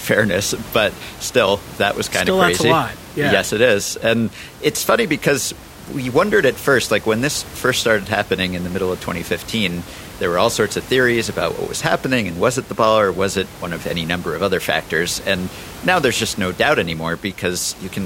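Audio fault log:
No faults are heard anywhere in the speech. Room noise can be heard in the background about 18 dB below the speech, as part of the recording itself.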